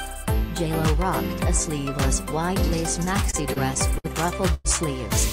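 From 3.05 to 4.06 s, repeated stalls (stutter): eight brief gaps, none longer than 59 ms, are bridged by repeating the last sound, so the audio drags unevenly rather than stopping once. At 4.54 s comes a single call audio freeze lasting 104 ms, a sustained continuation of the previous sound before playback resumes where it halted, likely caused by delayed packets draining the jitter buffer.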